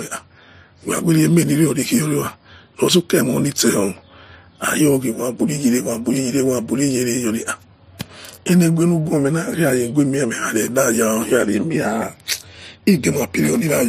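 Throughout, the speech has nothing above 15.3 kHz and layered, mismatched compression artefacts. This is likely transcoding between lossy codecs, which fits HE-AAC followed by low-bitrate MP3.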